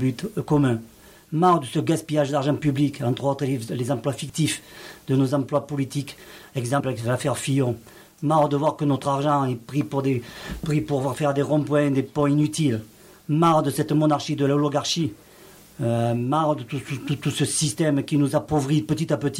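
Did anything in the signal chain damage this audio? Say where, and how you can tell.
Yes. A dropped buffer (overrun) occurs at 4.30 s, at the driver or buffer stage of capture. There is an abrupt jump in the sound and no gap of silence: roughly 20 ms of audio is missing and the material on either side is butted together. The likely cause is that the capturing software did not read its buffer before the hardware wrote over it, so that block was lost.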